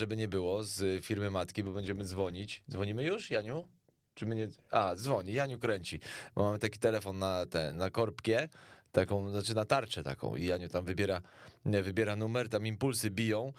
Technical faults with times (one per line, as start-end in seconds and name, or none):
1.67-7.45 call bitrate drop